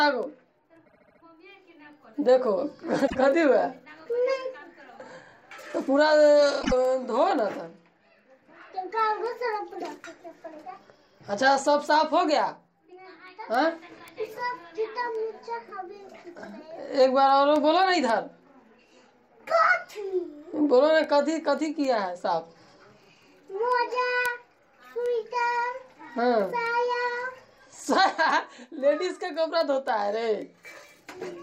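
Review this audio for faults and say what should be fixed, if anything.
Repeated frames: a run of compressed frames was sent or written more than once, so the decoder replays the same slice of sound. From 0.85 to 1.21 s a 72 ms block, consistent with three frames, plays five extra times, adding 360 ms as a stutter. At 3.06 s and 6.61 s a 24 ms block repeats twice more, adding 48 ms each. To prevent this, sequence-number frames and drop duplicates before decoding.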